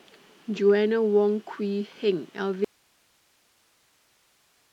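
At 2.65 s the speech cuts out abruptly and never returns. This is an audio dropout to a faint residue, likely a lost signal feed ahead of a still-live path. Hiss roughly 40 dB down remains rather than true silence, and the sudden change rules out a pause or fade.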